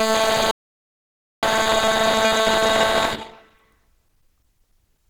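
Opus compression runs through the whole clip. The music sounds grainy and rough, with tones turning noisy instead of clean and a somewhat muffled, hoarse edge. The damage is plainly audible and fits a low-rate encode around 16 kbps, likely in Opus's hybrid mode.

An audio dropout to silence follows from 0.51 to 1.43 s. The music cuts off abruptly, and about 0.92 s of silence, with no background left at all, replaces it before the sound returns mid-flow. The input was likely lost while the recorder kept writing silence.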